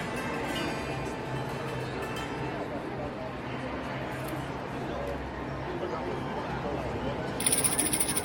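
No technical faults are audible.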